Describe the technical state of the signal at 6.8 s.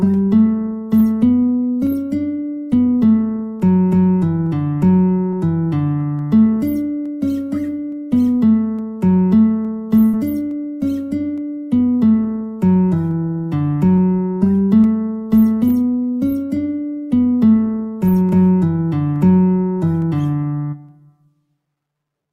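At 6.8 s the audio is inside clock drift buffer slips running from 0.14 s to the end. Two clocks likely differing by about 200 ppm let the buffer drift until a few samples are dropped or repeated, producing a brief click every 0.86 s.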